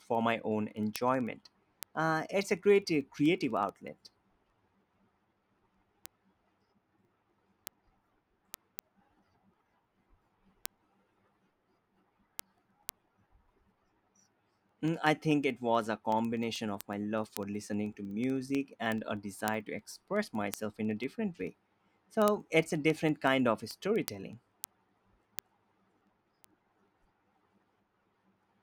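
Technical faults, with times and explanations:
0.15–28.62 s, word clock ticks: sharp single-sample ticks, roughly every 70 ms, because the receiver's clock drifts a few hundred ppm from the sender's.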